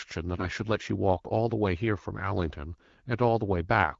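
A speech clip carried over AMR wideband (HD Voice) at what sounds like 12.65 kbit/s shows AMR bit errors from 0.34 to 0.47 s. A weak radio link flipped a high share of the less protected bits in a short run of frames, several percent, yet the checksum guarding the core bits still passed, so the decoder used the damage. Misplaced excitation pulses and skewed pitch, gain and spectral values make the voice turn hoarse, scratchy and gargly while keeping roughly its pitch and loudness.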